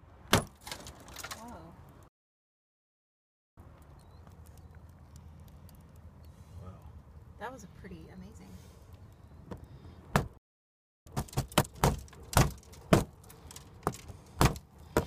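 At 2.08 s a playback stall cuts the sound for about 1.5 s, likely because the player ran dry. From 3.58 to 5.06 s, time-compressed catch-up plays it at twice speed, hurried but at normal pitch. A second stall silences 10.37 to 11.07 s. Catch-up then runs at double speed until 11.75 s.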